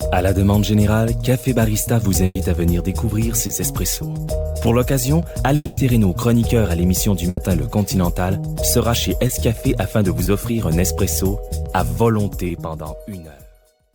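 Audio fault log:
2.25–2.37 s and 7.29–7.39 s, burst of packet loss: Two spots where a run of packets went missing in one go. At 2.25 s the receiver stretches the last bit of sound for about 100 ms, letting it sag into a held buzz or fading hiss before dropping into a short silence. At 7.29 s the last sound is stretched and sagged the same way over about 80 ms, without the silence. Both times the sound picks up further along, so that stretch of the original is simply gone.
3.47 s, 9.27 s, 10.23 s, 12.47 s, short concealed packet loss: Four quick blips, each with roughly 20 ms of real audio missing. The decoder covers each hole by extending what it just heard, carrying the pitch forward if the sound was tonal or padding with shaped noise if not, then crossfading back into the incoming audio. You get a tiny smear or wobble, and a brief sound landing right in the gap can vanish.
5.55–5.79 s, long network dropout: The longest hole in the clip. 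The last sound is carried on as a buzz or hiss and fades away across roughly 220 ms, ending in a brief silence before the audio returns further on. Everything from that span is missing rather than delayed. That length points to a stall in the connection, likely incoming audio stopping altogether for that moment, rather than just a few dropped packets.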